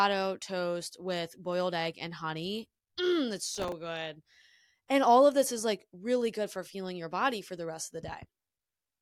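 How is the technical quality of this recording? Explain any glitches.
One glitch affects the recording. From 3.45 to 3.72 s there is processor overload crackle: roughly ten tiny buffers, around 1.5 ms each, miss their deadlines and repeat stale audio, causing gritty tearing.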